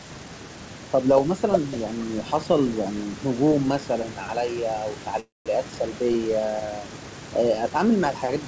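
At 5.20 s the speech stops and resumes at 5.48 s, a call audio freeze likely caused by late packets draining the jitter buffer. A brief fading buzz or hiss gives way to about 180 ms of silence, then speech continues intact, roughly 0.26 s later.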